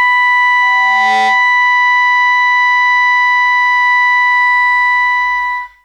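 At 0.62 s a loudspeaker feedback squeal kicks in over the music: a pure tone around 769 Hz that swells up over roughly half a second until it's sitting about as loud as the music itself, then hangs there until it cuts off at 1.57 s. What's happening is the mic hearing its own speaker, and at that one frequency the loop gain tops one, so the tone keeps feeding itself.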